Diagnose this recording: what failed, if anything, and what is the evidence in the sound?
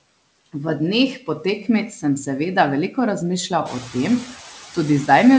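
Noise suppressor artifacts run through the whole speech clip, from the call processing stage. Background noise sinks by about 18 dB between words and comes back up underneath them. The room noise rises by about 13 dB near 3.5 s. The suppressor cuts noise-dominated bands frame by frame.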